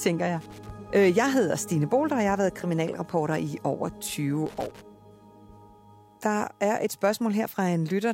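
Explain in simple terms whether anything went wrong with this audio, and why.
A worn or dirty contact in a cable plug kept briefly losing and regaining connection, which is loose connector crackle. Each time, the sound was chopped into a rough, scratchy burst, once from 0.41 to 0.70 seconds and again from 4.46 to 4.81 seconds.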